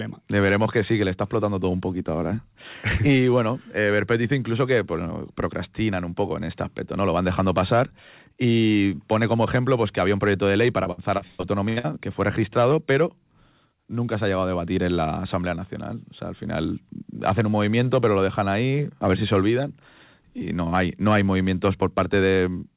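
Repeated packet loss (robotic sound) runs from 10.84 to 11.86 s, right after "proyecto de ley para" and ending just before "que fue registrado pero". Seven holes open in quick succession, the longest about 119 ms. Each is patched by stretching the last bit of speech, so roughly 380 ms, or 37% of the stretch, is concealment. The speech turns choppy, with pieces missing, over a narrow call-codec band that stops at 4 kHz.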